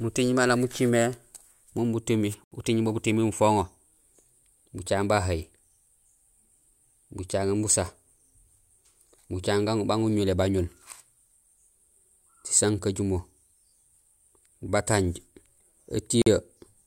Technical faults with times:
2.44-2.52 Bluetooth stall
16.22-16.27 Bluetooth stall

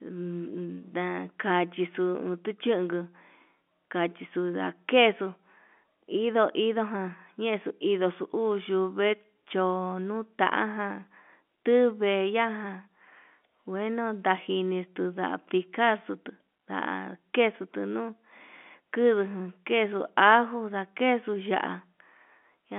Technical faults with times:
none

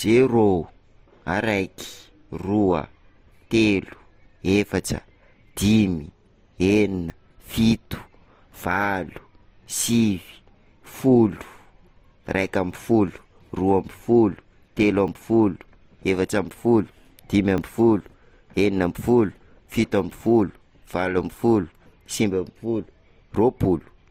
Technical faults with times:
0.00-24.10 transcoding between lossy codecs
7.10 dropped buffer (overrun)
15.08 dropped buffer (overrun)
17.58 dropped buffer (overrun)

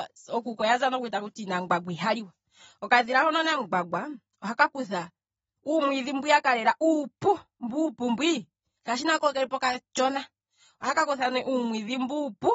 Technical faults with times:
0.00-12.55 AAC compression

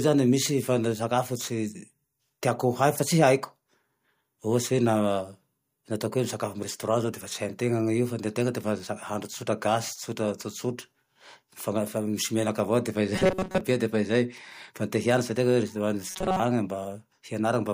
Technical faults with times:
13.16-13.61 robotic sound from repeated short buffers
16.08-16.40 robotic sound from repeated short buffers

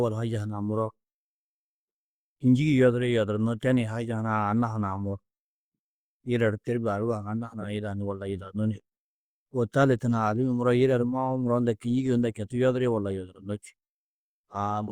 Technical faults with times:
none

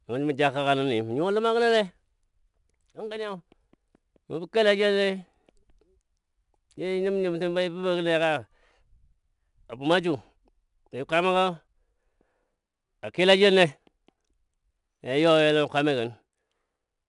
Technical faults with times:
0.00-17.09 4-bit ADPCM compression

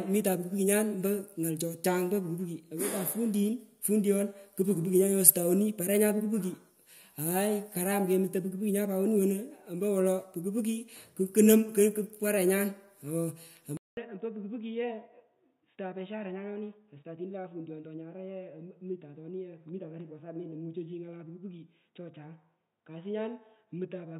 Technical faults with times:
13.77-24.20 input switched to a poorer device

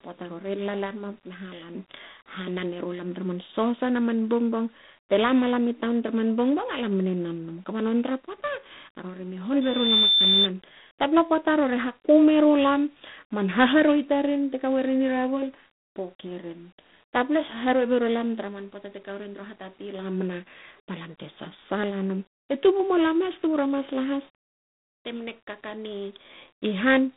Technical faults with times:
0.00-27.17 G.726 ADPCM
9.61-10.48 loudspeaker feedback squeal

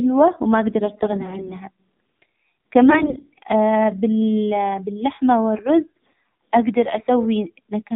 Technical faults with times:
0.00-7.96 AMR narrowband mobile codec
0.78-1.56 AMR bit errors
2.90-3.39 AMR bit errors
5.92-6.08 AMR bit errors

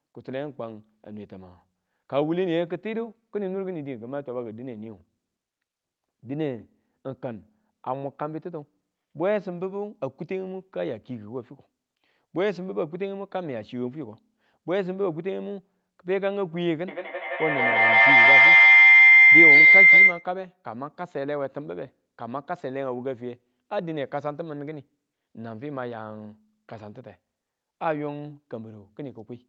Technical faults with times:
3.40-9.58 de-emphasis applied wrongly
16.88-20.31 feedback howl

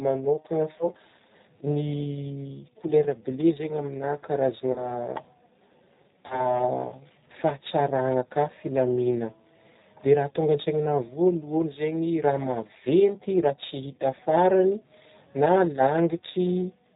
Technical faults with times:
0.00-16.96 G.729 codec
0.78-0.89 VoIP packet loss concealed by the speech codec
4.72-4.93 VoIP packet loss concealed by the speech codec
6.26-6.58 VoIP packet loss concealed by the speech codec

